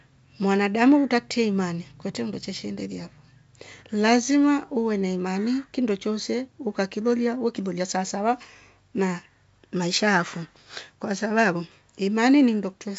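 Nothing stood out on listening to this speech, which carries the expected wideband telephone coding at 64 kbit/s with nothing above about 7.7 kHz.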